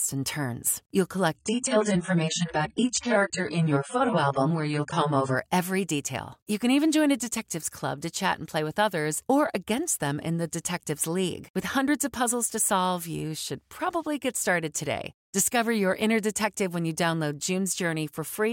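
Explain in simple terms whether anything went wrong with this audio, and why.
From 1.36 to 5.36 seconds the speech suddenly turns dull and full of compression artefacts, then recovers just before "every detail". This is an adaptive stream at a lower bitrate, switched in when the connection slowed.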